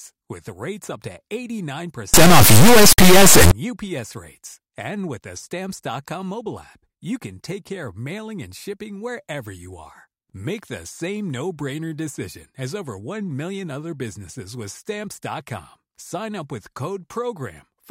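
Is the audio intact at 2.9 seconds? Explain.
No. From 2.14 to 3.51 s the speech turns into an extremely loud, harsh square-wave buzz that drops to silence in the quietest moments. This is an integer read as float fault: the sound points to 32-bit integer samples being interpreted as 32-bit floats, producing values that jump between zero and full-scale clipping.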